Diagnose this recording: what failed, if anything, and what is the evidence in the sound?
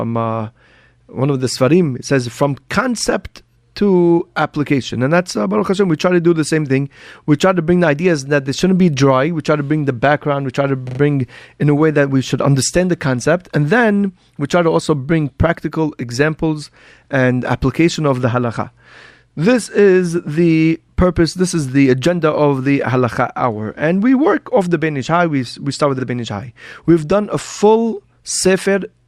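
Repeated frames at the codec or storage stage. After "try to", a 40 ms block plays three extra times at 10.87–10.99 s, adding 120 ms. Single repeats follow "we start with" at 25.99 s and "done a full" at 28.35 s. The compressed frames were duplicated, so the decoder replays identical audio as a stutter and lengthens the clip.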